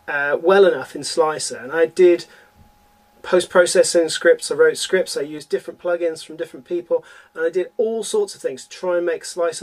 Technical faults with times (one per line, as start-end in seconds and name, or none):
5.38-9.62 one channel drops out